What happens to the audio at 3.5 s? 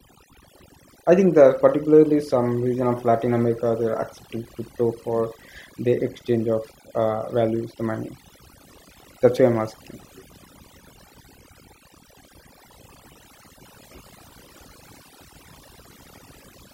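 At 3.5 s the speech carries overdone noise removal, present throughout the clip. The reduction was pushed so hard that bands near the noise estimate are gated away, taking quiet speech detail with them. The background drops and breaks up into twinkling specks. A spectrogram shows isolated flickering dots between syllables and ragged, hollowed-out gaps in the speech harmonics.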